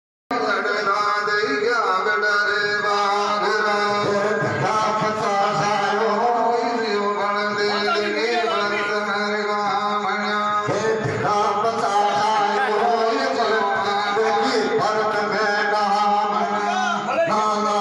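The audio has a cut-off start: it sits in digital silence until 0.31 s, then begins abruptly mid-sound with no natural attack. The capture or stream evidently began late. On a waveform this is a flat line jumping straight to the sound's ongoing level; a spectrogram shows a sharp vertical edge.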